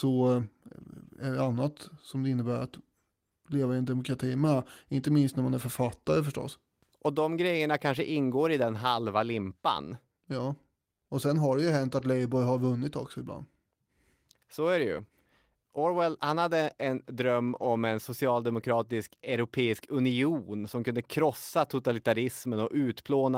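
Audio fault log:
4.45 s, 14.97–15.03 s, 17.47–17.65 s, 19.31–19.33 s, lost packet rebuilt from error correction: brief rough, noisier patches after "leva i en demokrati" and "är det", and before "en socialdemokratisk". There is no gap because the decoder played low-bitrate copies carried in the following packets. The longest stretch, 100 ms, points to five separate losses.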